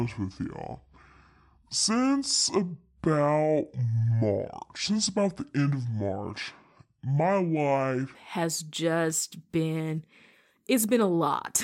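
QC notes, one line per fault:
0.00–8.15 s, section at the wrong speed. Speech runs at 0.652x, slow and about seven semitones deep, until "has just been". Likely a mismatched playback clock.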